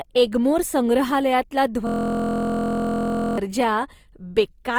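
From the start, the speech sounds rough and grainy, with noisy, smeared detail instead of swirling holes. This is likely Opus compression in its music (CELT) mode at a low bitrate, around 24 kbps. A spectrogram shows bands filled with noise-like texture and nothing above 20.4 kHz.

From 1.87 s to 3.38 s, a system hang loop replaces the speech with a steady buzz at about 43 Hz. One 23.22 ms slice, which fits a 1024-sample buffer, repeats exactly about 65 times. The waveform shows identical repeating blocks, and the spectrogram shows evenly spaced vertical stripes.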